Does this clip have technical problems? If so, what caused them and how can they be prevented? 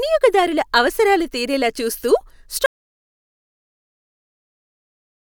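Yes. An audio dropout to silence begins at 2.66 s, right after "అవసరాలు తీరేలా చూస్తూ", and runs to the end of the clip. The speech stops mid-flow and gives way to silence with no room tone beneath it, so whatever followed is lost. This likely happened because the input signal disappeared, through a disconnected device, a broken link or an accidental mute, while the recorder kept writing silence. Secure cables and connections, and monitor input levels while recording so any loss is caught immediately.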